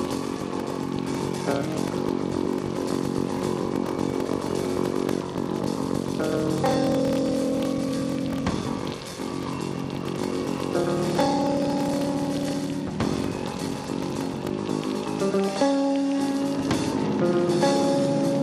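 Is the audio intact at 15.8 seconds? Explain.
Yes, at 15.8 seconds the audio is intact, with no dropout, click, distortion or other fault to be heard at that point.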